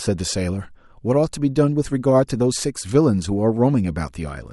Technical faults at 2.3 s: corrupt frame decoded

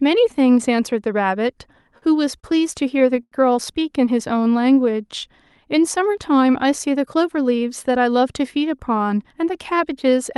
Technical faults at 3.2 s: short stall from a late packet

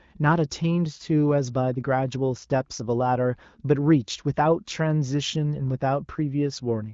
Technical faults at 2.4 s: none

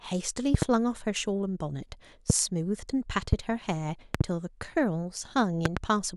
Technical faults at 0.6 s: loud pop

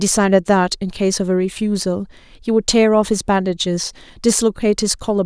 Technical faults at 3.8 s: none

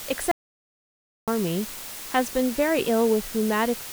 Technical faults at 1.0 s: low bit depth with dither; audio dropout to silence

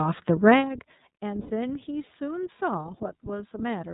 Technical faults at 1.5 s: iLBC codec; lost iLBC frames

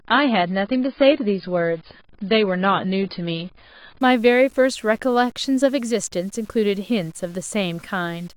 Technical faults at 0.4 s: low bit depth without dither; adaptive stream starting at a low bitrate

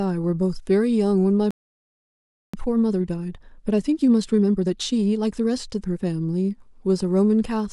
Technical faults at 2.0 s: playback stall

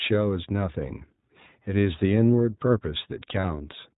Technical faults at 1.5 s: iLBC codec

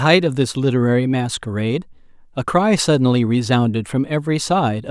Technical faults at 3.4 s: none

